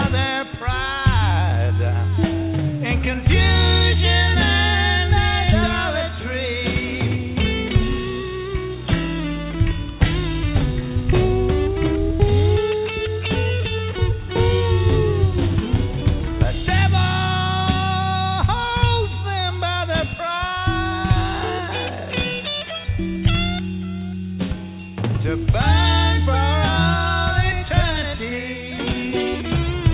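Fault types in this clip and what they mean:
Nothing to flag here: the audio came through a call path using G.711 mu-law at 64 kbps, and its lack of anything above 4 kHz is simply how that codec normally sounds.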